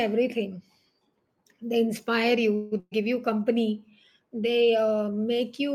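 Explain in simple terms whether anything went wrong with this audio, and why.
Two things went wrong in quick succession. At 2.55 to 2.74 s there is a call audio freeze: data likely got held up in transit, so the receiver stretched the last sound into a fading buzz or hiss for about 0.16 s before resuming with nothing lost. Right after, at 2.80 to 2.93 s, a burst of packet loss dropped about 0.12 s of audio. The gap was covered by a fading fill ending in a brief silence, and the speech picks up at "you company they" with that stretch missing.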